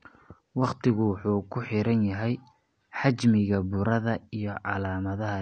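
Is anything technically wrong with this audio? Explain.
Yes. Throughout the speech, there is audible AAC compression damage. Nothing reaches above 9 kHz, so the sound is dull. Sibilants turn fizzy and smeared. This likely comes from AAC-LC at a low bitrate, which fits about 32 kbps. Quantising against a hearing model strips and blurs the upper bands.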